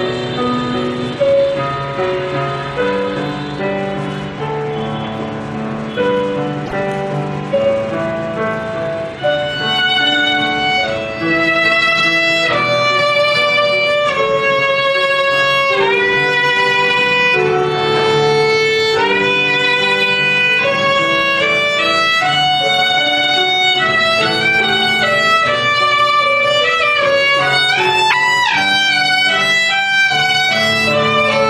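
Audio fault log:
6.65–6.73 s and 28.10–28.14 s: broken MP3 bit reservoir. The audio jumps ahead, and the next 81 ms and 44 ms come out as a chirp, noise burst or brief gap. The cause is likely missing frames: the following frames fetch borrowed reservoir bits from the wrong frame. These lengths span one to a few 26.1 ms frames.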